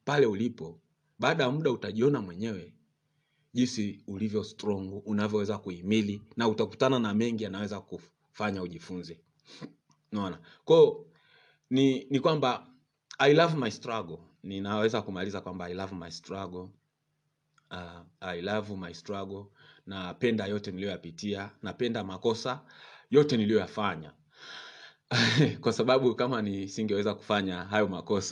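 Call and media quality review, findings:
No faults found in the speech recording; nothing to action on this ticket.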